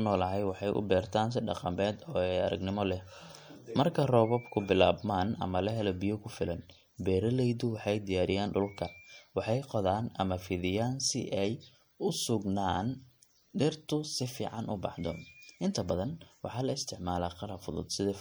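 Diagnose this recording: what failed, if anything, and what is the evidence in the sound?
MP3 compression throughout the speech: plainly watery, swirly texture with smeared onsets, likely a bit-starved codec stage, consistent with 64 kbps, dropping weak frequency lines.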